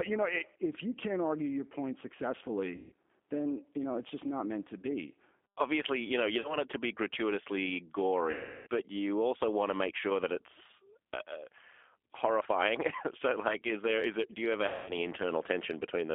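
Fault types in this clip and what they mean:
G.729 codec: the speech is squeezed through an 8 kbit/s codec that rebuilds it from a vocal tract filter and pitch predictor, so it sounds rough and synthetic. A spectrogram shows energy confined to roughly 250 Hz to 3.5 kHz, with smeared, sparse harmonics.
VoIP packet loss concealed by the speech codec: at 2.76, 6.40, 8.31 and 14.68 s, stretches of 40 to 360 ms are lost and the decoder extends the last sound as a fading buzzy tone or coloured noise. The waveform shows a decaying, repeating cycle, and the spectrogram a flat harmonic smear.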